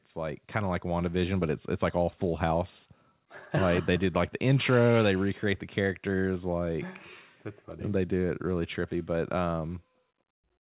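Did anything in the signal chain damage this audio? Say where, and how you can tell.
Yes: in call processing, automatic gain rising raised the level about 5 dB from 0.13 to 1.41 s, swelling speech and background together before "but it's it's like".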